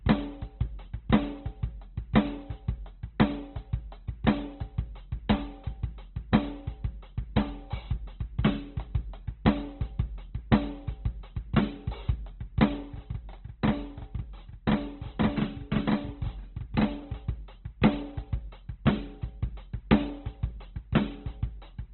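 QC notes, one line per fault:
throughout: Opus compression. The music sounds muffled, rough and grainy, with nothing above 4.2 kHz and tones smeared into noise. This is likely heavy Opus coding in its CELT music mode at a very low bitrate, around 12 kbps, filling starved bands with folded or noise content.
12.83–17.02 s: channel delay (doubling). The music turns doubled, with a second copy trailing the first by about 42.7 ms at equal level, like a tight slap echo. One channel is arriving late, which fits a 2048-sample buffer, and is summed with the other into mono.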